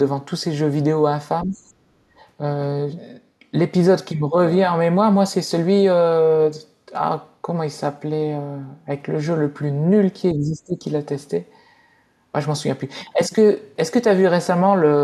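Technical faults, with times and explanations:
1.45 to 1.56 s and 10.34 to 10.84 s, speech suppressed in double talk: the talker's level sinks abruptly, by roughly 15 dB in the first, brief dip and around 20 dB across the half-second second one, then recovers. This is likely the echo canceller hearing far-end audio and near-end speech at once, failing to tell its own talker from loudspeaker echo, and pulling the whole microphone signal down.
1.84 to 2.17 s, background gated by the echo canceller: the room tone drops by about 18 dB for roughly a third of a second, then returns. While the loudspeaker was active, the canceller clamped the microphone path hard, so the steady ambience briefly vanishes and comes back once the canceller releases.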